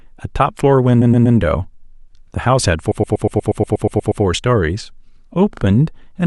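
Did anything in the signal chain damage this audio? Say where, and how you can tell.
Yes. Repeated frames stutter the speech at 1.01–1.37 s, 2.91–4.23 s and 5.53–5.62 s. A 120 ms block replays three extra times in the first burst and eleven in the second, adding 0.36 s and 1.32 s. The last burst repeats a 40 ms block twice, adding 0.08 s. This is a codec or storage fault: the same compressed data was decoded again, so the sound loops and stretches the timeline.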